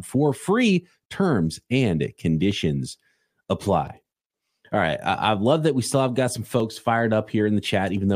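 From 1.15 s, just after "for free", to 7.97 s, a regular click recurs every 1.36 s. This is likely clock drift buffer slips, where a few dozen samples are dropped or repeated. Each slip shows as a waveform step and a thin vertical spectrogram line.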